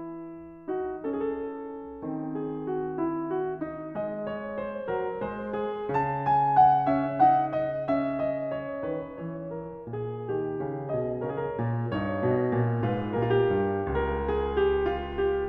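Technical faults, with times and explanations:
No technical faults can be heard in this music.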